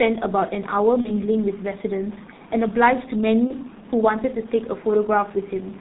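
The whole speech clip runs through the G.723.1 codec at heavy damage: nothing above 4 kHz, so it's muffled and hoarse, consonants smeared by the slow-updating voice model. The thinness fits roughly 6.3 kbit/s.

Around 1.01 to 1.10 s and again from 3.47 to 3.57 s there's VoIP packet loss concealed by the speech codec. Each gap sounds like about one dropped 30 ms frame. The decoder stretches the last sound into a buzzy tone or coloured noise that fades, and it stays weak briefly afterwards.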